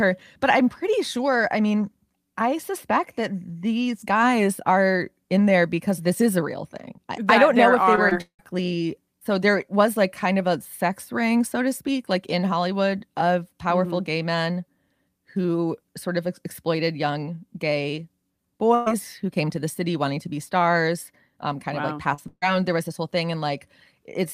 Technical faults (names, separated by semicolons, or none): short concealed packet loss; long network dropout; burst of packet loss